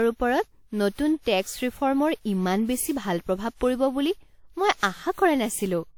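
Across the whole speech clip there is generation loss, with a swirling, hollow quality and smeared consonant attacks that sound worse than a single encode at this quality would. The likely cause is repeated decoding and re-encoding through a lossy codec, which fits around seven WMA passes at something like 96 kbit/s. Each pass requantises on a shifted frame grid, so noise piles up below the 20 kHz ceiling.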